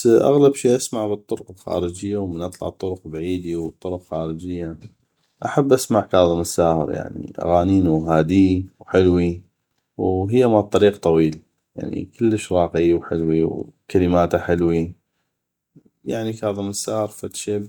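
No technical faults are audible.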